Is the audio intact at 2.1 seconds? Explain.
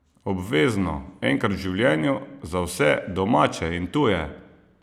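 Yes, the speech at 2.1 seconds plays through intact, with no dropout, click, distortion or other fault.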